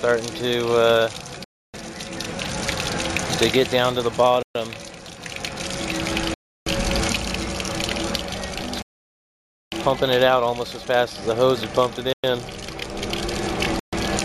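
Bluetooth stalls, likely from radio interference delaying packets until the receiver's buffer ran empty, drop the audio to silence six times: at 1.44 to 1.74 s, 4.43 to 4.55 s, 6.34 to 6.67 s, 8.82 to 9.72 s, 12.13 to 12.24 s and 13.80 to 13.93 s. Each stall is a sudden cut to dead quiet, mostly between about 0.1 and 0.3 s, with the longest lasting 0.9 s, before the sound resumes abruptly.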